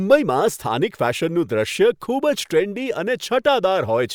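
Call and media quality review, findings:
No audible faults found in this speech recording.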